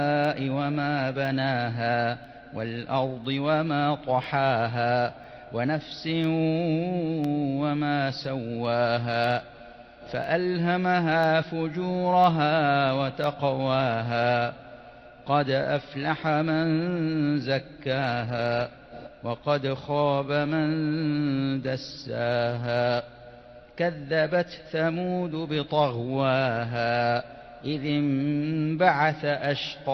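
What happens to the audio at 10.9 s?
At 10.9 s the audio sits within a run of periodic USB or driver dropouts spanning 0.25 to 14.24 s. Once per second a stall drops a tiny slice, well under a millisecond, replaced by silence, heard as a regular tick over the signal.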